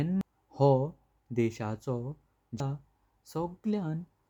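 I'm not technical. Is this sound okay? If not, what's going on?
No. Two brief glitches appear, at 0.21 s and 2.60 s. Each is a short chirp or blip caused by damaged data in a compressed stream. A small piece of the file was corrupted. The player misread it, lost its place, and then found its footing again.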